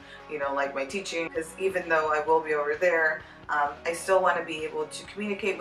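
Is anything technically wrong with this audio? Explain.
No, nothing technically wrong can be heard anywhere in this audio.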